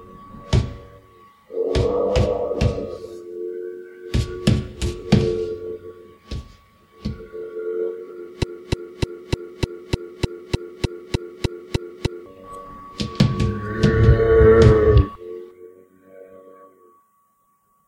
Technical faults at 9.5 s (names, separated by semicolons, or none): broken-record loop